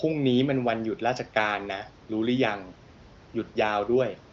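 Nothing in the recording stood out as a technical fault on listening.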